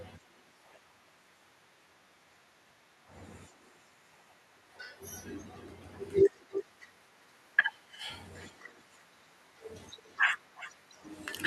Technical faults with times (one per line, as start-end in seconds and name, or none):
6.35-6.65 echo leak
6.94-6.97 overlapping chunks
8.39-9.02 echo leak
9.96-10.25 echo leak
10.55-10.73 echo leak